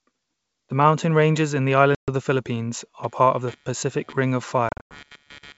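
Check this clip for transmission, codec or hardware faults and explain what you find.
Two faults are present in this speech clip, carried over clean-sounding G.722 wideband coding: packet loss on the ADPCM call, occurring twice, and computer activity noise.

Packet loss on an ADPCM call: at 1.95–2.08 s, after "mountain ranges in the", 130 ms drops to hard-edged silence. At 4.69–4.97 s, 190 ms is lost in scattered gaps, the longest 100 ms. Each time, the decoder's predictor loses sync, so speech returns slightly distorted.

Computer activity noise: from 3.03 s to the end, a buzz pulsing near 150 Hz, around 30 dB below the speech, rides on the audio. Changing computer load is disturbing the shared ground.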